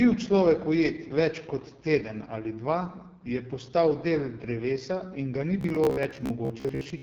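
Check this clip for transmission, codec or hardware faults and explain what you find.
Two faults are present in this speech clip: low-rate wideband codec coding throughout, and a robotic buzz near the end.

From start to finish, the audio passes through the AMR wideband (HD Voice) codec at about 6.6 kbit/s, its lowest rate. At that rate the pulse-based speech model has too few bits for each frame, so the coding damage is heavy. Speech sounds rough and raspy, with a grainy, synthetic edge, and nothing is present above 7.2 kHz.

From 5.61 s to 7.02 s, just after "drevesa in ga ni", the playback likely ran short of fresh audio and filled the gaps by looping the last short buffer while skipping the real material. Around two fifths of this stretch is repeated audio. The loop imposes a fixed buzz at about 66.7 Hz, which fits a buffer of roughly 15 ms. The result is a rigid, metallic, robotic drone that only loosely tracks the speech.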